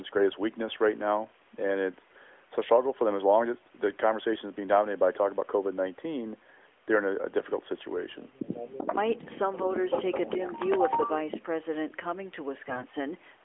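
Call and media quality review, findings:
Echo leak, 8.45–9.0 s, 9.17–9.38 s, 11.3–11.43 s. Far-end echo canceller likely failing to cancel loudspeaker pickup in the mic. Delayed copy of speech returns 388 ms late, about 5 dB below the talker, about 10 dB down in the middle burst.

AMR bit errors, 12.62–12.86 s. Weak radio link flipping unprotected class bits while the core checksum passes, at a rough error rate near 7 percent. Misplaced excitation pulses and skewed gain and spectral values make about a dozen 20 ms frames turn hoarse and gargly.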